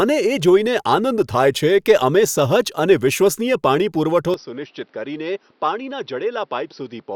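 Speech recording that, at 4.34 s, right after "વિશ્વસનીય પાણી પુરવઠો", abruptly turns duller and noticeably quieter, by around 10 dB, and stays that way to the end, with no gap at the change. From that point nothing is heard above 5.9 kHz, and a faint new background noise sits well beneath the speech. The likely cause is the input switched to a poorer device mid-recording, one with a narrower band, a different level and its own noise floor.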